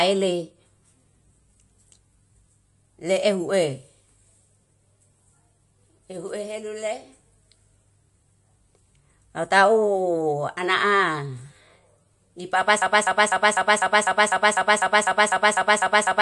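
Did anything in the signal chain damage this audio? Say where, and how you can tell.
Yes. The codec stage damaged the whole clip, and this is likely MP3 compression. Nothing is present above about 11.3 kHz. That is a fixed treble cut-off the encoder imposes when it runs short of bits. The speech has a watery, swirly texture, and the s sounds turn metallic. Weak frequency components flicker on and off between frames. Consonant attacks smear. This degree of damage points to a low bitrate, roughly 40 kbps.

From 12.82 s to the end, the audio turns into a broken-record loop. A fragment about 250 ms long repeats exactly, back to back, some fourteen times. The likely stage is playback or the stream buffer. It stalled and kept resending the last fragment it held. The evidence is the identical repetition at a steady 250 ms rate. The audio that should have played during those last seconds is lost.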